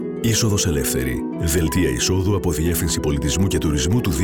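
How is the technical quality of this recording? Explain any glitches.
Nothing here trips me up: there are no glitches to explain, just steady, uninterrupted audio with no technical faults to point to.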